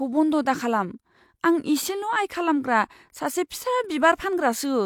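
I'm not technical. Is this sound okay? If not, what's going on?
Yes, the sound is okay. Nothing in this speech recording points to a technical problem you'd need to worry about.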